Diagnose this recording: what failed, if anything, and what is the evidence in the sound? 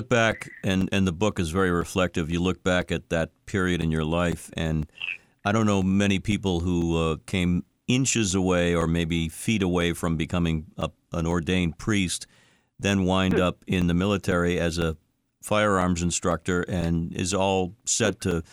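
Periodic USB or driver dropouts at the driver or buffer stage: from 0.31 s to 18.32 s, roughly 4 ms of speech is lost every 0.5 s and replaced by silence, giving about forty dropouts. Their clockwork spacing, unrelated to the speech itself, points to a blocked bus rather than a wiring or codec fault.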